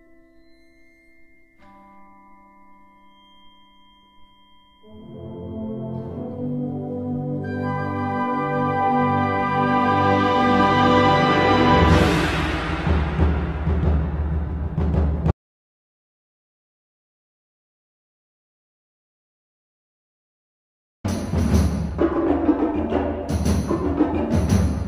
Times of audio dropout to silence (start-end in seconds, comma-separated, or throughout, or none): 15.31-21.04